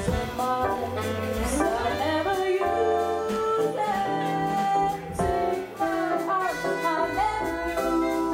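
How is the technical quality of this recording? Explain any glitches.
The recording has two short bursts of loose connector crackle. The first runs from about 0.73 to 0.91 s and the second from 3.31 to 3.36 s. A worn or dirty contact in the cable or jack is briefly making and breaking as it shifts, so the audio gets chopped on and off, and any DC sitting on the line turns each break into a pop. What you hear is a ragged, irregular scratchy crackle.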